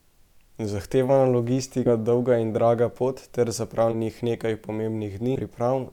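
At 1.85 to 1.89 s, just before "dolga in draga pot", compressed frames are skipped. About 100 ms vanishes. After "in draga pot ter", at 3.91 to 3.95 s, about 70 ms goes. At 5.35 to 5.38 s, about 200 ms drops. Damaged or missing frames, likely 20 ms each, make the audio jump ahead.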